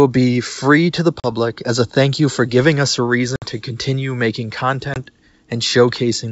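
Three hard-edged holes cut into the speech, at 1.20–1.32 s after "be free to the", at 3.36–3.46 s after "for giving us a", and at 4.94–4.99 s after "to continue making". Each is followed by slightly distorted speech that settles within some tens of milliseconds. This is packet loss on an ADPCM call: about 40, 60 and 20 ms of audio went missing, roughly two, three and one packets. The receiving decoder's predictor and step size drifted from the sender's before resettling.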